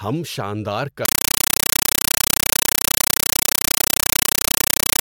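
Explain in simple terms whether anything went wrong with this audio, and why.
From 1.05 s, right after "ہم شاندار", the speech is replaced by loud chattering static to the end. This is a compressed stream played as audio: the pattern, which fits an undecoded Dolby Digital stream, is 8 ms noise bursts about 31 times a second, played as raw samples.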